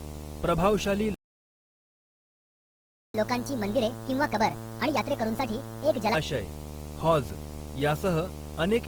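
From the start there's video or display buzz sitting under the speech: a steady 75 Hz hum-buzz with hash above it, only about 10 dB below the signal. That's a screen or video cable leaking its field rate into the audio path, so it's hard to miss.

Running through the whole clip, the speech also sounds grainy and rough, with tones turning noisy rather than swirly, even though the top end stays wide open to around 20 kHz. That's likely Opus compression in its music mode at a low rate, something like 16 kbps, with the encoder filling starved bands with noise.

At 1.14 s there's a playback stall. The sound just cuts out mid-flow and stays silent for a full 2 seconds until 3.14 s. It's likely the player running dry of data or having its thread blocked, and it picks up again where it left off.

Right after, from 3.14 s to 6.14 s, you get catch-up at higher speed. The player rushes its backlog at 1.5 times normal speed, so everything's faster and pitched up roughly seven semitones, chipmunk-ish, before dropping back to normal.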